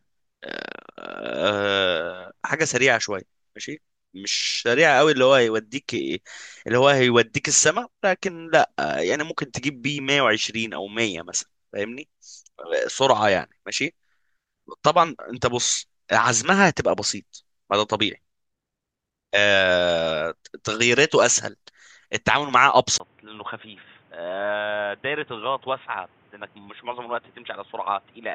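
At 22.98 s there's a 20 ms gap, then the speech runs dull and boxy to the end, nothing above 3.7 kHz, about 10 dB quieter, with a new noise floor roughly 30 dB down. Likely an input switched to a poorer device mid-recording.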